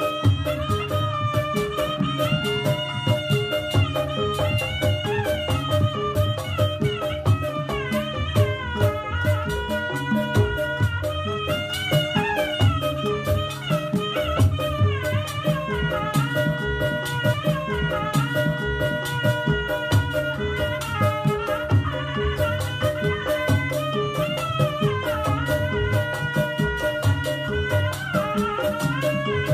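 At 17.32 s the player queued the same stream segment twice, a repeated segment: about 2.0 s of audio replays through 19.32 s, with a small blip at the jump back.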